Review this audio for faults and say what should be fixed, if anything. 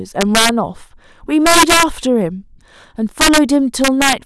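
Integer overflow cracks hit the speech at 0.21–0.49, 1.46–1.83, 3.21–3.38 and 3.84–4.13 s. Peaks overdriven by about 3 to 7 dB wrap to the opposite sign instead of limiting. Use saturating arithmetic or a limiter before integer conversion.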